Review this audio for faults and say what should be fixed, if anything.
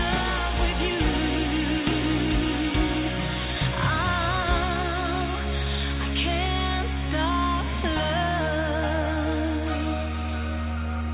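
Nothing stood out on listening, so there is nothing here that needs fixing.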